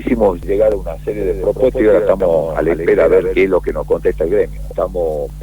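From 1.10 s to 3.38 s the audio carries a doubled audio track: a second full-band copy trails about 150 ms behind, roughly 5 dB quieter, with no decay or room colour, and cuts in and out abruptly. Likely cause is a slower parallel capture path.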